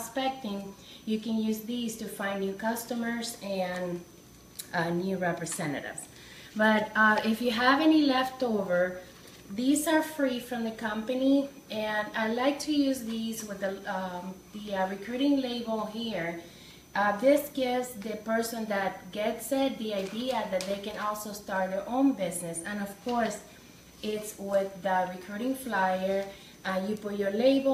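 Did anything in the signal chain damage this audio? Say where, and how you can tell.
Yes. A thin, high whistle runs through the whole clip, wandering between about 6.01 and 6.08 kHz and sitting roughly 35 dB below the signal. This switching supply whistle enters at the analogue stage: a switching power supply, running in an audible burst mode or beating with another supply, couples into the wiring.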